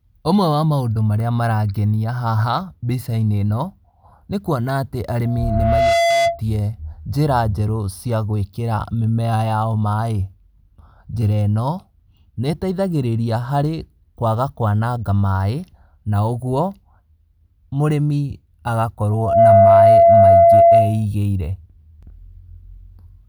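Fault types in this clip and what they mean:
Loudspeaker feedback squeal: the microphone re-captures its own loudspeaker, and a 680 Hz tone swells over the speech twice, the second time louder and faster.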